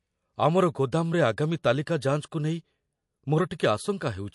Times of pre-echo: 3.58

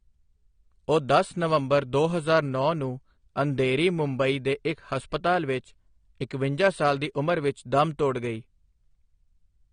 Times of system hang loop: none

